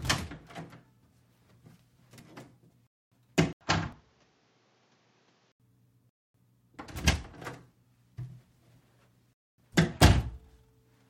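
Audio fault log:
2.87 s, 6.09 s and 9.33 s, gap between chunks: three silences, each 250 ms long, one after every 3 s chunk of sound. The sound stops cleanly and then resumes exactly where it left off, so nothing is lost; the stream is only held up at each join. That regular 3 s spacing and the fact that no content is missing tell it apart from a dropout, where part of the sound disappears.
3.53–5.60 s, input switched to a poorer device: an 80 ms silence comes first. Then the sound turns dull and boxy, drops about 10 dB in level, and gains a new noise floor roughly 30 dB below it. At 5.60 s the full sound returns. The likely cause is a change to a different microphone or headset profile. The band, level and background noise all change together and then switch back, which tells it apart from a simple filter or EQ change.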